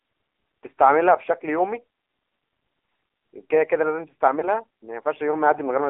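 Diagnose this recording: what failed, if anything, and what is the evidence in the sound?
Codec stage: the whole clip sits inside a 250 Hz to 3.5 kHz band with plainly audible buzzy, synthetic AMR narrowband mobile codec damage, which fits a low rate around 7.4 kbps.

Network stage: lost AMR speech frames around 4.40 to 4.45 s produce a brief dip or warble, consistent with one 20 ms frame concealed from previous parameters.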